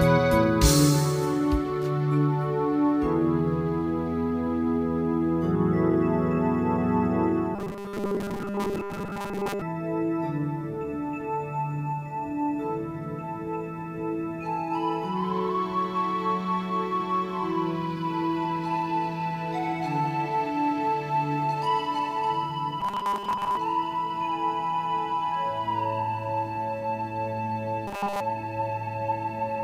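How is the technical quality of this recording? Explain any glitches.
Three stretches of robotic sound from repeated short buffers mark the recording: 7.56 to 9.62 s, 22.81 to 23.58 s and 27.88 to 28.20 s. Each imposes a rigid 200 Hz buzz, fitting a 5 ms fragment replayed while fresh audio is skipped, likely because input arrived too slowly. About 70% of the material repeats in the first two stretches, and all of it in the last. A spectrogram shows evenly spaced horizontal bands at multiples of 200 Hz, and the waveform shows identical 5 ms cycles.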